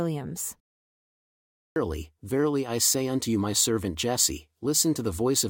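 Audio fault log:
1.59–1.76 s, clipped start after a pause: after about a second of silence the output is waking up and swallows the first 171 ms of speech, which then begins abruptly at "verily I say unto". The waveform jumps from flat straight to speech level, and the spectrogram shows a hard vertical edge.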